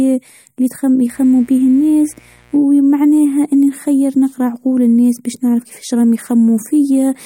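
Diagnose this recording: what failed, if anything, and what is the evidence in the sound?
Mains buzz from 1.10 to 2.60 s: a raspy 60 Hz buzz well below the speech, from switching spikes leaking into the analogue wiring twice per mains cycle.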